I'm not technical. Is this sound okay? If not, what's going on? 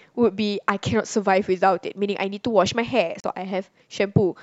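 No, there's one glitch. From 3.20 to 3.24 s the speech cuts out for about 37 ms, then picks up a bit further along, as if it kept playing. That's most likely a Bluetooth dropout, where a couple of wireless audio packets arrived too late and were skipped.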